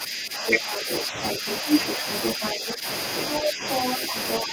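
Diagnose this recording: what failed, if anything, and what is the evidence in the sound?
Call processing failed here, in the echo canceller. There is speech suppressed in double talk at 0.0 to 1.67 s, 1.98 to 2.87 s, 3.41 to 3.65 s and 4.07 to 4.52 s. In each stretch the talker's speech dips, by up to about 10 dB in the first three and about 5 dB in the last. The likely cause is a canceller that could not tell the talker from the loudspeaker echo while both played, so it turned everything down.

The same stage also lets the other side's voice leak through, at 0.47 to 1.57 s, 1.89 to 2.74 s, 3.16 to 3.96 s and 4.29 to 4.43 s. In the first stretch that second voice sits roughly 5 dB above the talker. In the later ones it is about level with the talker. The stretches overlap the dips. The likely cause is loudspeaker playback reaching the microphone and the canceller failing to subtract it fully.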